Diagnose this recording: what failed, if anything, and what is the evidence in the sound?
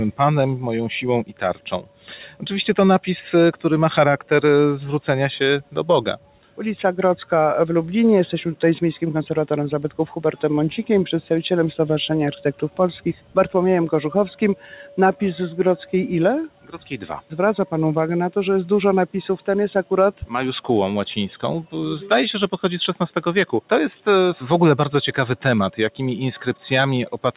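Noise suppressor applied to music or sounds, throughout the clip, at the call-processing stage. The level keeps breathing by roughly 10 dB as a speech-tuned suppressor treats sustained, steady material and its ambience as background noise and pulls its gain down. Onsets pass largely intact, but held passages and decaying tails sag, giving a pumping, hollow character. All of this rides on a narrowband call path with nothing above 4 kHz, as expected from a telephone-grade codec.

Sound cut by the noise suppressor, at 1.24 to 2.06 s, 6.17 to 6.59 s, 12.36 to 12.79 s, 13.14 to 13.36 s, 14.56 to 14.98 s and 16.49 to 16.77 s. In each stretch the suppressor's noise estimate caught the sound itself and attenuated it well below its surroundings, by about 12 dB at worst, and by about 9 dB in the 14.56 s dip. The sound audibly sinks or has its decay clipped for a few hundred milliseconds before recovering.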